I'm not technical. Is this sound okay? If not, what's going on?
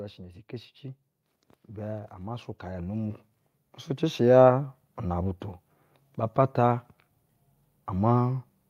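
No. From 1.74 to 5.39 seconds, automatic gain rising occurs. The recorder thought the input was too quiet, so the voice and background slowly grow louder together.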